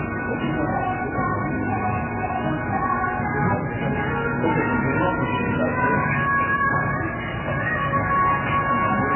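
MP3 compression damage runs through the whole clip, with nothing above 3 kHz and a watery, swirling texture in what remains. The likely cause is an encoder starved of bits, dropping the treble and switching weak frequency components on and off between frames, which fits a very low bitrate around 8 kbps.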